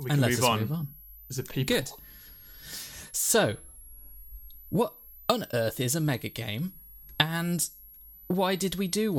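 A thin, high whistle runs through the whole of this speech recording, sitting roughly 25 dB below the voice and wandering in pitch between about 11.2 and 12.1 kHz. That drifting tone is a switching supply whistle: a switching power supply in the recording chain is running in an audible burst mode, or beating against another supply, and its frequency shifts as the load on it changes.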